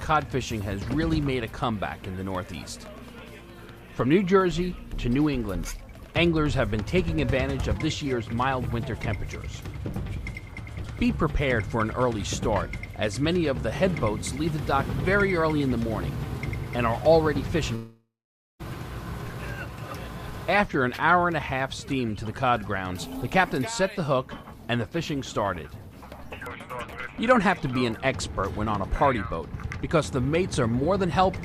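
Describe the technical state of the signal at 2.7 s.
2.7 s the signal is intact, with no dropout, distortion, glitch or other technical fault present at that moment.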